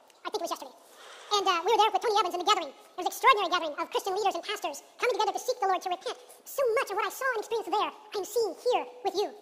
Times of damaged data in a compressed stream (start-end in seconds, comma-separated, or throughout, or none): none